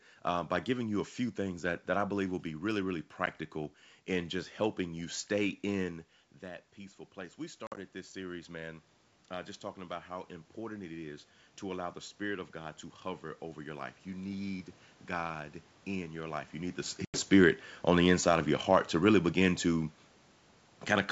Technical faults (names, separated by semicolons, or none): packet loss on an ADPCM call; automatic gain rising